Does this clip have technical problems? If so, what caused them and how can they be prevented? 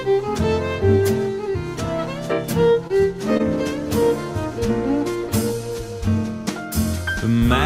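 Yes. Short concealed packet loss at 2.87–2.91 s and 3.37–3.41 s: about 20 ms went missing each time, and the decoder extrapolated the preceding sound to fill it. On a spectrogram this shows as briefly smeared harmonics. Prevent it with a larger jitter buffer and forward error correction on a steadier network link.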